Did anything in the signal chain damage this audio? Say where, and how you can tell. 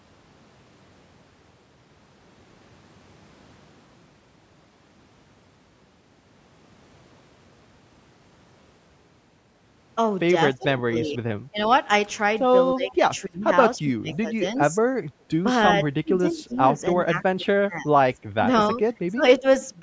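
Yes. From 10.58 to 11.2 s, 11.51 to 11.58 s, 12.75 to 14.76 s, 16.03 to 17.92 s and 18.35 to 19.45 s the speech repeatedly dips and breaks into pieces, sinking by roughly 20 dB at its worst (about 25 dB near the end). This is speech suppressed in double talk at the call-processing stage. The echo canceller likely could not tell the near talker from loudspeaker echo while both sides spoke, so it attenuated everything.

Short, faint repeats of the voice surface at 11.58 to 11.65 s, 15.7 to 15.74 s and 16.37 to 16.56 s. They trail the original by 288 ms and sit about 15 to 25 dB below the speech. They sound like scraps rather than a continuous second voice. This is echo leak, also from call processing. A loudspeaker on one end likely fed the microphone, and its echo canceller let part of that pickup return down the line.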